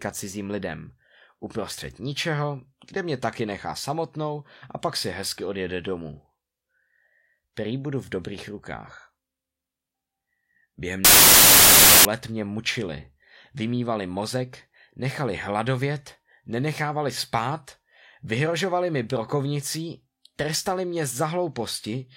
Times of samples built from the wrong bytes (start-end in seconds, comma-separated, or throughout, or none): 11.05-12.05